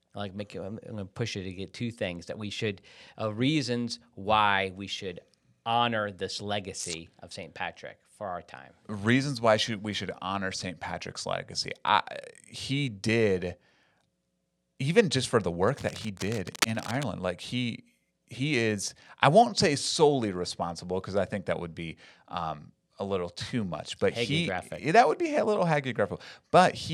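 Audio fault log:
15.68 to 17.03 s, cable scratch noise: for about 1.4 seconds a dense, ragged rustling sits over the speech, roughly 10 dB below it. The bursts are uneven and gritty, with no steady hiss or tone to them. That's likely a worn cable, connector or pot being moved, with its contact resistance jumping around quickly and throwing those irregular noise spikes into the signal until it settles again.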